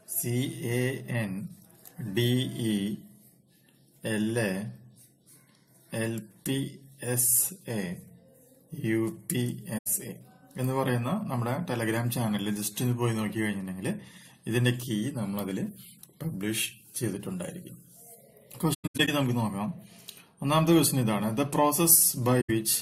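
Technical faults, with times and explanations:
9.77–9.87 s, AAC frame loss with muting: a soft-edged dropout of about 85 ms, which fits around four lost frames. The decoder zeroes their spectrum, and the overlapping windows fade the sound out and back in rather than clicking.
18.73–19.09 s, AAC frame loss with muting: a stuttering patch of several short holes scattered over about 340 ms. The longest gap is around a tenth of a second, and each one fades smoothly at the edges.
22.41–22.50 s, AAC frame loss with muting: another gentle gap of about 85 ms. The zeroed frames leave a quiet hole that the window overlap blends in and out.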